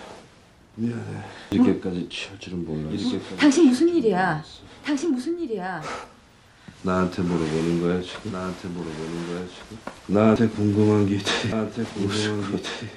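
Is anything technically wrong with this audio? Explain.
Yes, two problems. Throughout, there's a doubled audio track: a full-band copy trails the original by roughly a second and a half, maybe 10 dB quieter, with no decay or room colour. It's likely a second capture path or an edit leaving two copies out of step.

There are also dropped buffers (overruns) at 1.52, 6.04, 10.36 and 11.52 s. Each is a sudden jump forward, losing roughly 70 ms, or about 40 ms at 6.04 s. The likely cause is samples being overwritten before the program read them.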